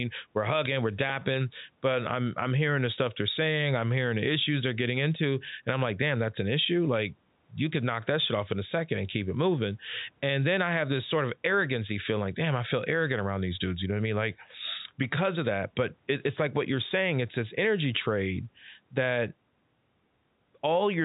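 No technical faults can be heard in the speech: it sits in the narrow telephone band typical of G.711 coding, with nothing above 3.8 kHz, and the room's background noise stays about 43 dB below it.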